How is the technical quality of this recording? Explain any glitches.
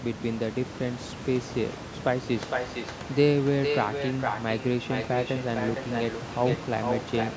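The main problem is an echo leak, heard over room noise about 11 dB below the speech and a top end that stops at 8 kHz. From 2.23 s to the end, a second copy of the speech trails about 0.46 s behind, about 5 dB quieter than the original. The likely cause is a loudspeaker on one side whose echo canceller didn't fully remove its microphone pickup, so that sound went back down the line.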